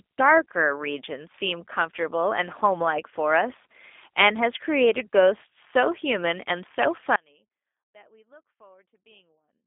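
From the start, the speech carries the signature of the G.729 codec. Its band is squeezed to a telephone line of roughly 250 Hz to 3.6 kHz, with nothing above 3.7 kHz, so sibilants lose their edge. The damage is plainly audible: a rough, slightly synthetic texture that fits an 8 kbit/s stream rebuilding each short frame from a vocal-tract model and a few pulses. On a spectrogram the energy stops at a hard ceiling near 3.7 kHz, and the harmonics look smeared.

At 7.16 s the speech drops out abruptly and stays out to the end of the clip. This is an audio dropout to a faint residue: the signal isn't silenced but falls to a faint leak about 30 dB below its normal level, which points to the wanted feed likely being lost while the path after it stayed live. The waveform shows a sudden collapse to a thin sliver rather than a taper. On a spectrogram a vertical edge gives way to a dim, low-level trace.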